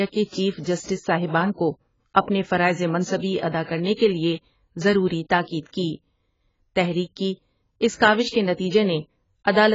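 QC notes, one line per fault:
throughout, AAC compression: the speech is dull and smeared, fizzy on sibilants, with nothing above 7.6 kHz, likely from heavy AAC-LC coding that fits about 16 kbps.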